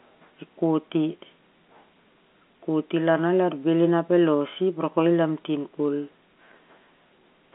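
Nothing stood out on listening to this speech, which comes through the narrow telephone band of G.711 coding as expected.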